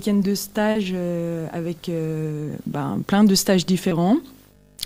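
From the start and for the whole clip a video or display buzz sits under the sound, roughly 25 dB below it. It is a rasping buzz at 50 Hz, the picture's field rate, with hash spread above it and a thin, very high tone at 15.6 kHz from the line scan. A screen or video cable is coupling into the audio path. That high line tone, and the gritty edge from the frame's pulse shape, set it apart from plain mains hum, which would be smooth harmonics of 50 Hz with nothing up near 16 kHz.

At 0.71 s comes a short concealed packet loss. About 40 ms of audio never arrived in time, and the receiver filled the gap by extending the preceding sound before blending back into the real signal by 0.77 s. A second, shorter one follows at 3.89 s, where about 20 ms was patched and rejoined by 3.93 s. Each is heard as a brief smear or wobble rather than silence. That filling is what separates it from a dropout or a click, where the gap would be empty or would carry a sharp discontinuity.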